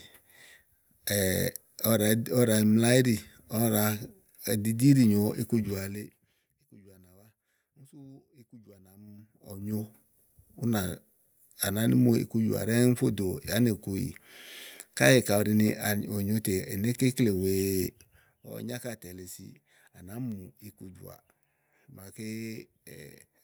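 A speech clip with zipper noise during three level moves. From 5.76 to 6.41 s the level drops by roughly 25 dB. From 8.92 to 9.85 s it climbs back by a similar amount. From 17.83 to 18.48 s it falls again, by around 15 dB. Each move goes in unsmoothed 3 dB steps, about 15, 10 and 7 a second respectively. Every step leaves a small click, so a ticking zip rides on the voice.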